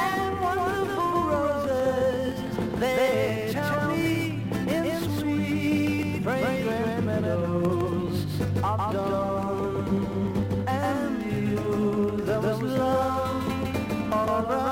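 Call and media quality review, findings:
Doubled audio track, throughout the clip. A second full-band copy trails the original by around 150 ms at about the same level, with no decay or room colour. Likely a second capture through a slower path, mixed back in out of step.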